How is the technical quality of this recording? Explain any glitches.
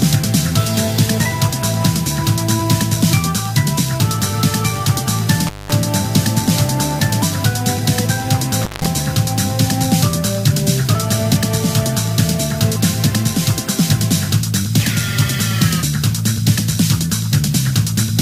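The recording has two brief dropouts. At 5.47 to 5.72 s and 8.61 to 8.86 s, an intermittent contact briefly opens the line for about 200 ms and 170 ms. Sound cuts out, with crackle at each edge and faint hiss between.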